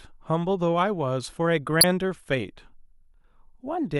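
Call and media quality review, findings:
Corrupt frame decoded, 1.81–1.84 s: short loud chirp in speech, peaking at about -5 dBFS. Decoder stage. Bit-damaged compressed data played as valid for a couple of frames. Misread gains and codes put energy at wrong frequencies for those frames.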